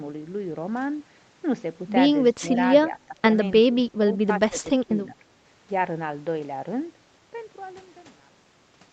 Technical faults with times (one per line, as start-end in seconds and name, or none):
2.90-3.23 speech suppressed in double talk
3.70-4.04 speech suppressed in double talk
4.49-5.25 speech suppressed in double talk